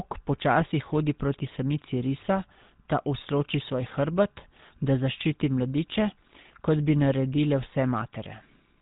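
Throughout, the speech has a buzzy, gravelly roughness and nothing above 4 kHz, the sound of the GSM full-rate codec. It rebuilds the voice from a vocal-tract filter driven by regular pulses, and at a bitrate that fits 13 kbps the damage is plainly audible.

From 0.59 to 0.62 s a brief squawking, gargled burst breaks through. These are GSM bit errors: flipped bits corrupted the decoder's filter, pitch or gain values, distorting the spectrum for what sounds like two frames.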